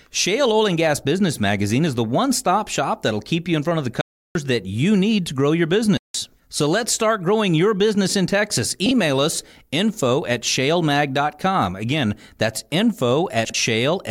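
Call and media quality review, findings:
Block of digital silence: hard cut to dead silence, a clear hole in the speech. 4.01–4.35 s (about 341 ms), between "in front of the" and "that you need to". 5.97–6.14 s (about 171 ms), right after "need to grow your". Probable component: playback or render path. Mechanism: output buffer not filled in time and zeros sent instead. The lengths fit missed buffers of 16384 and 8192 samples.

Frames out of order: brief garbled flutter, no time lost. 8.86–8.91 s, just before "us info at". 13.45–13.54 s. Probable component: jitter buffer or packet reordering. Mechanism: adjacent runs of frames decoded in swapped order. This points to single 24 ms frames exchanged in the first event and two-frame runs in the second.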